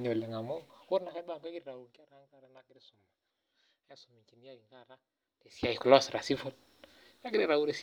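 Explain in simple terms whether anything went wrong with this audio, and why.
Yes, there is zipper noise. From 0.55 to 2.11 s the speech fades down in small, separate steps, roughly fifteen a second, and from 5.42 to 5.79 s it jumps back up in much quicker steps. Each step ticks, unlike a smooth fader move, which stays silent.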